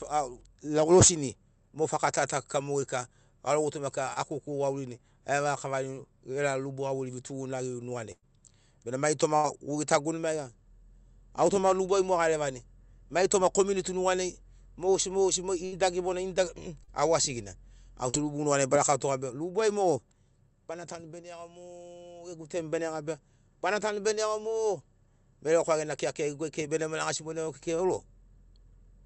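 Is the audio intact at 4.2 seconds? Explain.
No. Short concealed packet loss runs from 4.13 to 4.24 s. About 20 ms of the speech arrived too late to decode. The receiver filled the gap by extending the preceding sound, then blended back into the real signal. It's heard as a brief smear.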